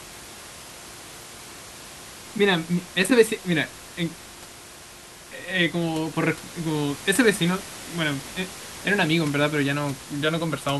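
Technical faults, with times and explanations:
No technical faults can be heard in this speech clip. The room's background noise sits about 16 dB below the speech, as part of the recording itself.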